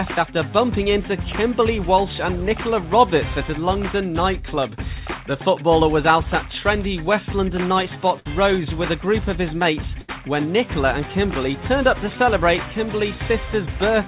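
Short concealed packet loss at 0.84 to 0.88 s: roughly 20 ms of the stream arrived too late to decode, and the receiver bridged the hole with about 16 ms of synthesised continuation of the preceding sound before blending back, leaving a brief smear or wobble.

Burst of packet loss at 8.20 to 8.27 s and again at 10.01 to 10.10 s: consecutive packets were lost, about 60 ms and 80 ms of audio respectively. The decoder extended the last sound for about 56 ms and 72 ms, fading it as a held buzz or dying hiss, then jumped ahead with the intervening material gone.

Throughout, nothing reaches above 4 kHz, a narrowband call path consistent with G.711 mu-law at 64 kbps.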